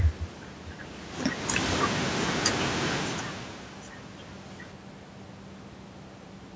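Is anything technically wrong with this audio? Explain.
Yes. The clip has a cut-off end at 4.72 s. The final buffers were never written, so the speech stops mid-sound and drops straight into digital silence with no decay.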